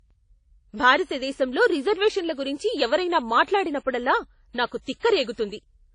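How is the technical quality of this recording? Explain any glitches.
The technical quality is compromised by audible codec damage throughout the speech. Throughout, the sound rings and washes, with breathing hiss and nothing above 10 kHz, likely from WMA compression at a low bitrate, which fits roughly 32 kbps, smearing noise over long blocks.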